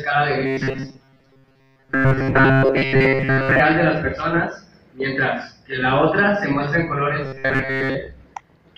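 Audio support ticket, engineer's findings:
Robotic sound from repeated short buffers, 0.46–3.60 s and 7.24–7.95 s: rigid metallic buzz locked at 134 Hz, most of the sound replaced by repeats. Likely input starvation looping a ~7.5 ms buffer. Constant buzz pitch separates it from codec warble.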